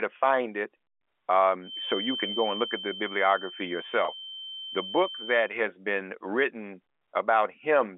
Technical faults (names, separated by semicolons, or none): feedback whistle; packet loss with pitch repetition